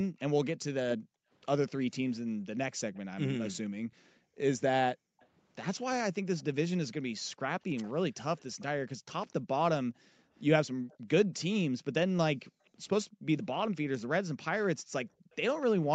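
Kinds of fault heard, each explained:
Echo leak: From 0.18 s to 15.63 s a faint delayed copy of the speech trails the direct sound by 252 ms, sitting roughly 30 dB below it. The likely cause is a far end playing the call over a loudspeaker, with its echo canceller not fully removing what its microphone picked up and sending the residue back down the line.
Background gated by the echo canceller: Between 0.97 s and 15.32 s the room sound behind the speech dips and then recovers, adding up to around three seconds in total, with the deepest drop about 40 dB. This happens when the echo canceller, hearing its loudspeaker active, clamps the microphone level hard to suppress echo, pulling the ambience down with it until the canceller releases and the background returns.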